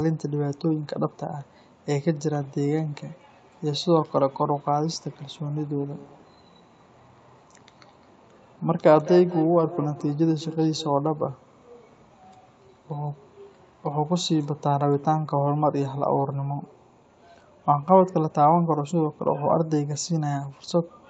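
From 5.78 to 11.07 s the speech carries a feedback echo between two devices: one device replays another's microphone, which picks the sound up again, so each word returns roughly every fifth of a second, thinner and ringing, peaking about 13 dB below the speech.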